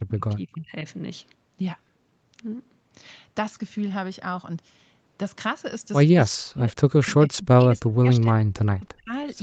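Speech, with speech suppressed in double talk at 0.0–0.85, 6.3–6.7, 7.11–8.49 and 8.69–9.12 s. It dips in fragments by about 25 to 40 dB, unlike a clean dropout, likely an echo canceller ducking while both sides talk.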